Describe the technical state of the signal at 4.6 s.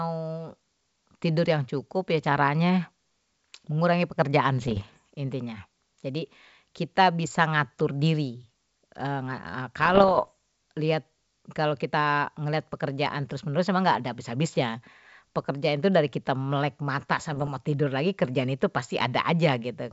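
Bit errors on an ADPCM link hit the speech from 4.58 to 4.97 s. At a rate of under one percent, flipped bits throw off the decoder's step size and predictor, so each error rings briefly as pops, rough bursts and short jumps in level.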